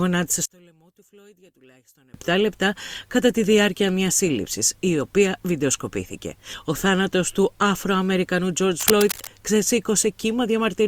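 From 0.46 to 2.14 s the sound drops by about 31 dB and turns faint, the likely result of one channel inverted, so the shared centre content cancels in the mono sum. The waveform shrinks to a sliver, and the spectrogram loses most energy.

From 8.78 to 9.30 s a rough, crackling rustle sits over the sound, nearly as loud as the signal itself. This is cable scratch noise, likely from a worn connector or cable shifting its contact. The spectrogram shows dense, irregular broadband vertical streaks, and the waveform shows jagged spikes.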